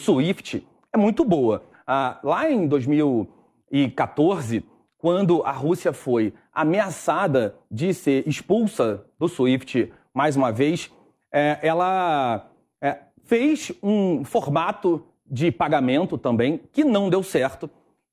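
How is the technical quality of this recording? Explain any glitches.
The technical quality of the recording is sound, with no glitches to explain.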